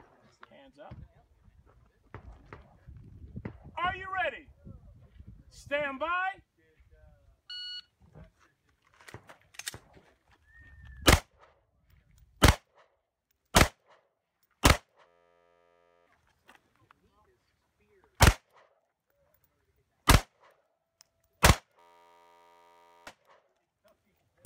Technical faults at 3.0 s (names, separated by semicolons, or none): none